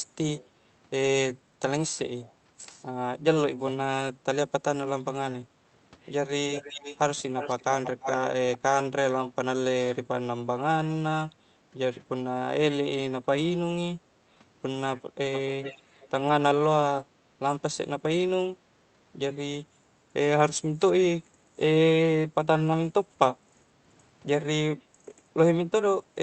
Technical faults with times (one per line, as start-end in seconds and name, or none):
6.53-6.98 echo leak
7.36-8.28 echo leak
15.34-16.08 echo leak
24.94-25.05 background gated by the echo canceller